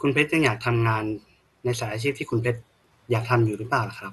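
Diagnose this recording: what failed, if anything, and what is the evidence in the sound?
The codec stage failed: the speech is dull throughout, with nothing above 12.2 kHz and a gurgling, granular roughness, most likely MP2 compression at a low rate that fits roughly 64 kbps. Starved of bits, upper sub-bands switch off and flicker while the remaining bands are coarsely quantised.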